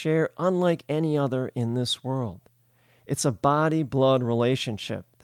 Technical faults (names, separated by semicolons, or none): none